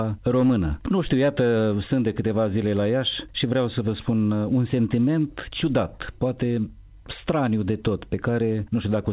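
No technical faults can be heard: the audio arrives intact over the WebRTC call path, with the band ending at 4 kHz in a way that fits a G.711 mu-law telephone codec running as intended.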